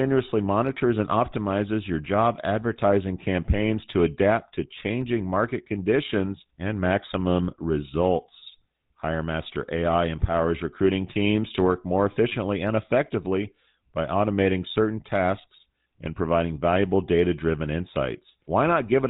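GSM full-rate codec coding runs through the whole speech clip, plainly audible from start to finish. The coder models the vocal tract and rebuilds the excitation from sparse, regularly spaced pulses, which gives a buzzy, gravelly roughness and cuts off everything above 4 kHz. The result fits the 13 kbps full-rate coder.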